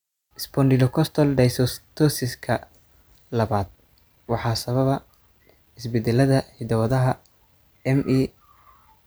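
Nothing technically wrong can be heard in this speech recording, and the signal stays continuous and intact throughout.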